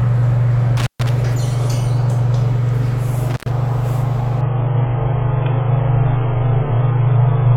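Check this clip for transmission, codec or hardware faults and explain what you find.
Two kinds of fault are audible.

Intermittent contact at 0.77–1.09 s and 3.30–3.51 s: a loose plug or cable briefly opens the line, so the sound drops out for about 130 ms and 100 ms, with crackle at each edge and faint hiss in the gaps.

Adaptive stream at a lower bitrate from 4.41 s to the end: a slowed connection forced a cheaper stream, so quality falls abruptly without a gap. Nothing remains above 3.6 kHz and codec artefacts thicken, which fits a stream of around 8 kbit/s.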